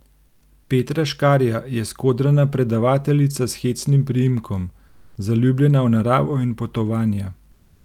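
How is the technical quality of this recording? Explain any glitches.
Two short glitches affect the background. Comfort noise replaces the background at 4.87–5.15 s, between "hecnim priimkom" and "zaljubljena v naravo in", and again from 7.51 s to the end. The likely cause is discontinuous transmission: the sender paused, and the receiver filled the gap with steady, featureless synthetic hiss. That hiss is about 3 dB quieter the first time and about 4 dB louder the second.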